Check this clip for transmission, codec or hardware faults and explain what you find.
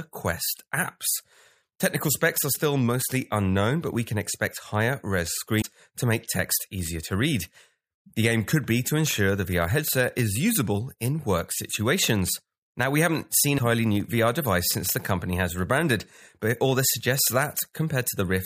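One fault is present: damaged data in the compressed stream, from 5.61 to 5.65 s, between "can expect higher res" and "to make text easier". Corrupt bytes made the decoder misread frames and lose sync until it found the next frame header. The result is a brief break in the speech.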